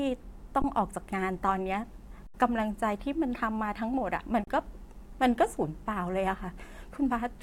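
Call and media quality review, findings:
Underrun with held sample at 0.62–0.64 s, 2.27–2.34 s, and 4.44–4.47 s (20, 73, 33 ms). Output buffer ran dry and the converter held its last value. The speech stops abruptly without a click, then resumes where it stopped. Waveform shows a flat line. Spectrogram shows blank vertical bands.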